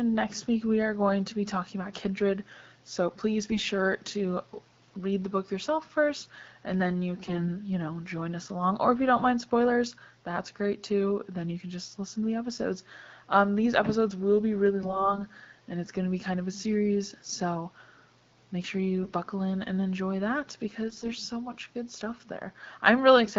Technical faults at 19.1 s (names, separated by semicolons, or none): AMR bit errors